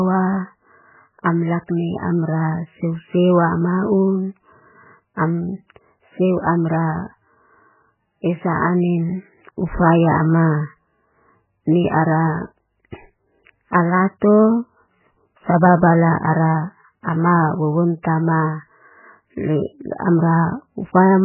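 From start to finish the speech sounds starved of bandwidth, and the likely culprit is heavy MP3 compression. Nothing comes through above 3 kHz, so the treble is simply gone, and the damage is severe enough to suggest a very low bitrate, something like 8 kbps. With so few bits, the encoder drops weaker frequency lines that flicker in and out between frames, leaving that watery, swirly texture, and consonant attacks come out smeared.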